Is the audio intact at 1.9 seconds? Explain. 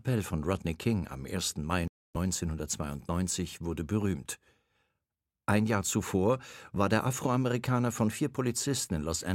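No. A Bluetooth stall spans 1.88 to 2.17 s: 273 ms of silence, then the sound resumes, likely because delayed packets drained the headphones' buffer.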